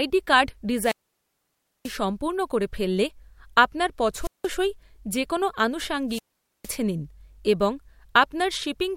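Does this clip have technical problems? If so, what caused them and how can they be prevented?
Yes. Three times the speech gives way to a short rise of hiss and static, then a hole of near silence before it returns: from 0.79 to 1.97 s (silent for about 0.94 s, just before "সম্পূর্ণ করে ফেললে আপনার"), from 4.20 to 4.49 s (about 0.18 s, just after "সম্পূর্ণ করে ফেললে আপনার"), and from 6.08 to 6.72 s (about 0.46 s, just before "নিন এবং"). This is wireless microphone squelch dropout. The analogue FM radio link weakened, its noise rose, and the receiver's squelch shut the output off until the signal recovered. Shorter distance, clear line of sight, diversity receivers and well-placed antennas keep the signal above the squelch threshold.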